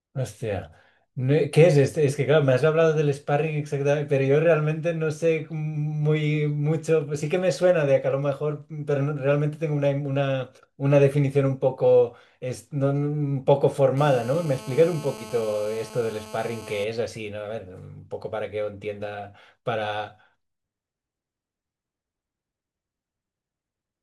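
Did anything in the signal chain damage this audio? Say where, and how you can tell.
Yes, GSM phone buzz in the analogue wiring, 13.97 to 16.84 s: a steady, raspy 217 Hz buzz about 18 dB down, from rectified call bursts.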